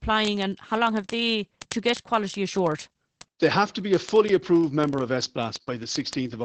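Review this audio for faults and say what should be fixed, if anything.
Opus voice compression runs through the whole speech clip. The encoder is at 12 kbps in its SILK linear-prediction mode, a wideband setting, so everything above about 8.6 kHz is missing. With so few bits the excitation is coded coarsely, which leaves the voice muffled, hoarse and slightly robotic. On a spectrogram, energy stops at a flat ceiling near 8.6 kHz, and the harmonics below it look smeared and blotchy from one 20 ms frame to the next. To prevent it, encode at a higher bitrate, or keep a lossless or high-rate copy and avoid transcoding through a low-rate voice codec.

Word clock ticks run from 0.12 s to 6.43 s, a steady train of sharp clicks of uneven strength roughly every 30 ms, around three hundred in all. The receiving device was running on its own clock, off from the sender's by roughly a tenth of a percent. 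Each time the two clocks slipped past each other, a single sample was dropped or repeated. On a waveform each tick is a one-sample step or spike. On a spectrogram they appear as thin vertical lines, evenly spaced across the full band. To prevent it, lock the receiving device to the incoming digital clock, or put a sample-rate converter in the path.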